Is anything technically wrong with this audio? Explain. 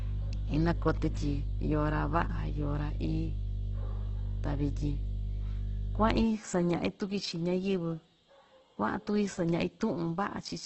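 Yes, there are two faults. Throughout the speech there is heavy damage that is likely from Opus compression. Nothing is heard above 8.2 kHz. Tones sound rough, grainy and noisy, because the encoder fills starved bands with folded or noise content. That points to a very low bitrate, around 12 kbps, in its music mode.

From 0 to 6.24 s there is mains hum. A steady 50 Hz tone with low harmonics sits under the speech at about the same level. Power-line current, through a ground loop or a nearby transformer, has leaked into the signal.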